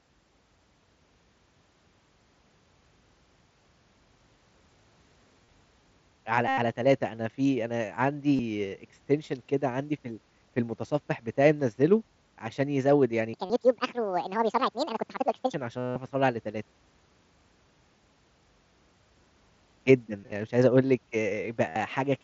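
Concealed Bluetooth headset packet loss at 5.45 to 5.48, 6.48 to 6.58 and 8.36 to 8.39 s: lost headset packets are patched by repeating recent waveform, giving brief buzzy held tones, longest at 6.5 s.

Section at the wrong speed from 13.34 to 15.54 s: the sound runs 1.68 times fast and rises close to ten semitones, likely from playback against the wrong clock. Another concealed loss falls inside it at 13.45 to 13.50 s.

Further concealed packet loss at 15.78 to 15.96 s is a 180 ms held buzz with a warble on recovery. Scattered short gaps follow from 20.21 to 20.32 s, and a loss at 21.69 to 21.76 s, all over the wideband mSBC headset link.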